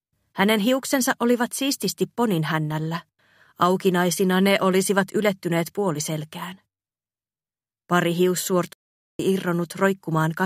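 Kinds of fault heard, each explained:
Playback stall: the player likely ran short of data or had its output thread blocked, so nothing reached the output for a while; the sound cuts off mid-flow at 8.73 s and stays silent for about 0.46 s before resuming at 9.19 s.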